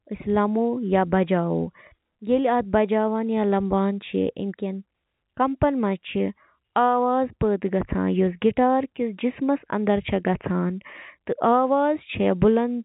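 Speech recording with no audible technical faults.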